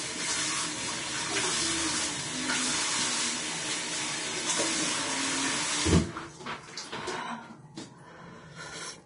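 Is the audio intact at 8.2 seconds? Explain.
No. Vorbis compression damage runs through the whole clip, so it is present at 8.2 seconds too. The heaviness of the damage fits a low bitrate of around 31 kbps, and the likely cause is an aggressive Vorbis encode. At that setting nothing survives above 10.6 kHz, and the remaining treble is quantised so coarsely that fine detail turns into noise of similar energy. The result is a hissy, grainy texture, roughened tones and smeared attacks.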